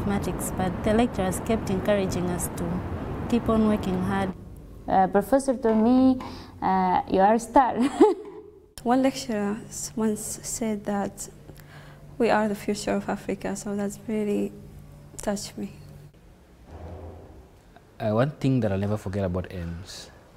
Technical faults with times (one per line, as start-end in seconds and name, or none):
none